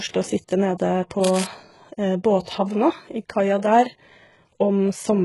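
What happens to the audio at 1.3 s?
A burst of cable scratch noise runs from 1.23 to 1.44 s. It sounds like dense, uneven scratching and rustling laid over the speech. It sits roughly 10 dB below the speech. The likely cause is a worn cable, connector or control carrying a DC voltage being moved. Its contact resistance then jumps about rapidly. Those changes leak into the signal as the ragged noise bursts heard here.

The same moment also carries HE-AAC compression, which runs through the whole clip. The codec damage is heavy. Nothing reaches above 11.5 kHz. The treble below that edge is likely rebuilt by spectral band replication, with lower bands copied upward and shaped by a coarse envelope. Its harmonics do not match the original, so s sounds come out gritty, metallic or lispy. The damage points to a very low bitrate, around 12 kbps.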